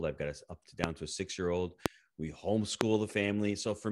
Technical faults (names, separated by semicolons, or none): loud pop